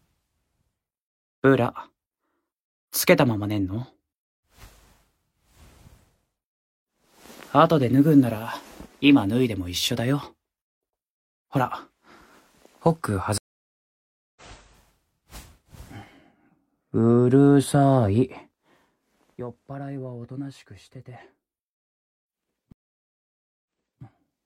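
The audio breaks off twice with a stream reconnect, at 13.38 to 14.42 s and at 22.72 to 24.02 s. Each time the connection drops, the player goes quiet, then restarts decoding mid-stream. The first gap lasts about 0.98 s and the sound picks up roughly a second further on, so material is skipped. The second gap lasts about 0.93 s and resumes 0.37 s earlier, so a short stretch is heard again. On a waveform each appears as a flat dead line followed by a soft ramp back in, and on a spectrogram as an empty vertical band with a clean discontinuity at its far edge. Between 18.14 and 18.94 s the level falls by around 15 dB with audible zipper noise. The gain moves in many small unsmoothed jumps, roughly 150 a second, and each jump puts a tiny click into the signal, heard as a fine ticking riding on the fade. A waveform shows a finely stepped, staircase-like envelope, and a spectrogram shows faint, evenly spaced vertical striations across the band during that stretch.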